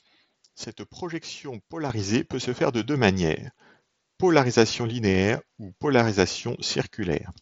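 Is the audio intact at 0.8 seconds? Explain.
No. At 0.8 s the speech sits inside a sudden gain jump running from 0.64 to 1.9 s, where the level drops by about 9 dB in a single step and returns just as abruptly. The cause is likely a digital gain setting applied without any ramp. The speech and the background noise fall and rise together. That sets it apart from compressor pumping or a fade, which move gradually and follow the speech itself.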